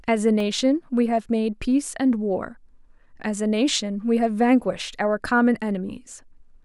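At 0.40 s a block of digital silence, 0.52 ms long, cuts into the speech. The sound cuts out and returns with no fade, heard as a tick or dip. The waveform shows a tiny flat gap with abrupt edges, and the spectrogram a thin vertical line across all frequencies.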